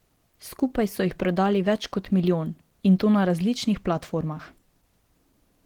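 Throughout the speech, the sound is muffled and hoarse, with grainy, rough upper frequencies, likely from Opus compression in its hybrid mode at a rate near 16 kbps. On a spectrogram, energy reaches 20.2 kHz, but the high bands look noisy and smeared rather than harmonic.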